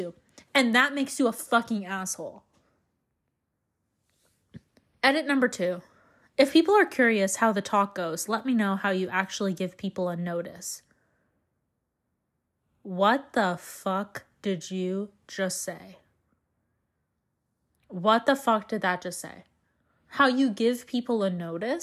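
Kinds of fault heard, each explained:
No technical fault can be heard anywhere in the speech. There is nothing to list under any kind.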